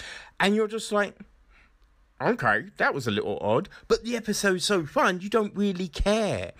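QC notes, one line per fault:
Nothing stood out on listening to the speech here.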